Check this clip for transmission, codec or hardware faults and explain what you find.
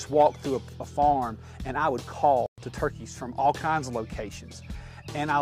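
One fault: at 2.46 s the audio drops to silence for about 116 ms, until 2.58 s, then resumes. This is likely a Bluetooth stall: delayed packets emptied the playback buffer. On a waveform and spectrogram it shows as a clean blank gap.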